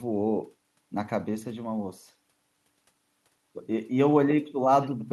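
No technical faults can be heard anywhere in this speech recording. Nothing in it calls for a timestamp or a repair.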